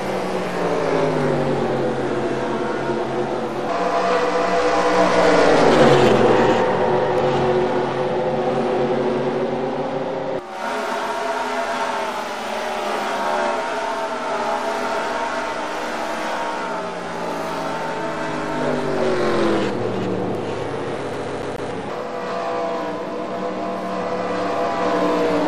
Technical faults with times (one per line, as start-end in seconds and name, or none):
21.13-21.71 CD stuck on one turn